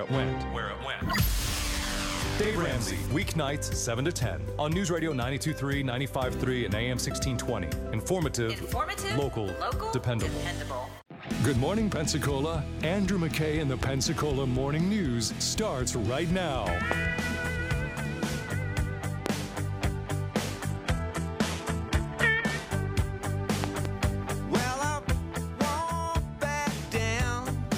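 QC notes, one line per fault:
13.83 to 23.87 s, loud pop: Single sharp pops land at 13.83–13.85, 16.92–16.94 and 19.26–19.28 s. A quick pair follows at 23.64–23.87 s. Each peaks at roughly 20 dB above the surrounding audio, and the sound carries on underneath. The cause is likely a brief voltage spike, such as a switch, static or driver glitch, entering the chain. The following circuits shape it into a hard, short thump.
20.70 to 22.70 s, adaptive stream at a lower bitrate: For two seconds the quality drops abruptly, with no gap. The sound turns duller, and nothing remains above 12.3 kHz. This points to the player stepping down from a 96 kbit/s AAC-LC rendition to a 16 kbit/s HE-AAC one. That low rate has to rebuild the treble synthetically, so codec artefacts rise until the higher version resumes.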